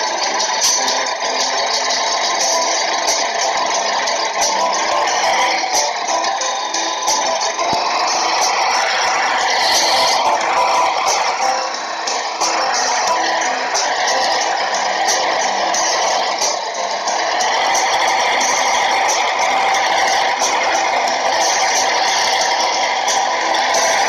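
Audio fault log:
7.73–7.75 s: loud pop. A single sharp pop, roughly 10 dB above the surrounding level, sits on top of the sound, which carries on unbroken beneath it, so this is not a dropout or edit click. The likely cause is a brief voltage pulse, from a switch, plug or static discharge, entering the signal.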